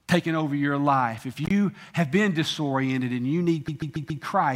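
Speech clip with two faults. Intermittent contact at 1.44 to 1.51 s, just before "have been": a loose connection opens for about 50 ms, cutting the sound out with crackle at both edges. Repeated frames from 3.67 to 4.23 s: a 139.3 ms block of compressed audio plays four extra times, stuttering and adding 557.3 ms, consistent with a run of six frames being re-sent.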